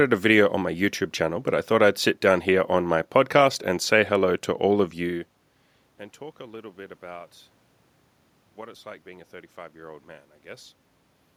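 Nothing stood out on listening; the background noise of the room and the change in level around five seconds, as the talker shifts relative to the microphone, are part of the recording itself.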